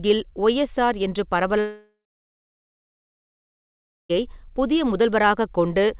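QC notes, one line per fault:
1.60–4.18 s, long network dropout: audio likely stopped arriving for about 2.5 s after "ஒய்எஸ்ஆர் என்று"; a brief concealment buzz fades into about 2.2 s of silence before sound resumes.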